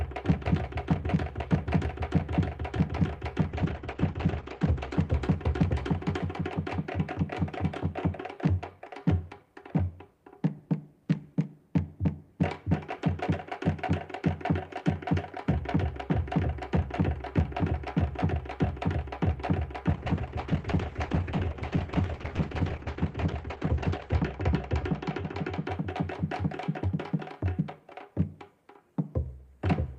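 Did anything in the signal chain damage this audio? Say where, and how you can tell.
Yes. A call bitrate drop at the codec stage, from 3.52 to 6.63 s and from 19.91 to 25.71 s. The top end narrows to 8 kHz and the sound coarsens and turns watery, which fits the encoder dropping from roughly 40 kbps to 10–12 kbps.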